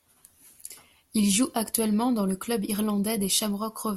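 Speech recording, no technical faults detected anywhere in the audio.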